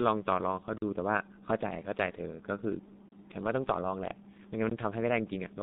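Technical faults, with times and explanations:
Throughout: G.723.1 codec. The speech is squeezed into a narrow line band of roughly 150 Hz to 3.7 kHz at about 6.3 kbit/s, so it comes out muffled and hoarse. The slow-updating voice model smears the consonants, and the damage here is heavy.
0.78 to 0.82 s: underrun with held sample. The output ran dry for 40 ms and the converter just froze on its last value, so the sound flatlines briefly. Playback picks up where it left off without dropping audio, so any click is soft.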